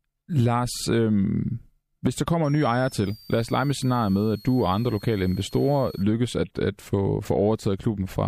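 A switching power supply drifting into an audible burst mode puts a switching supply whistle over this speech clip from 2.44 to 6.03 s, just after "hvis der kommer": a thin tone near 5 kHz, wandering between 4.27 and 5.59 kHz, about 25 dB below the speech.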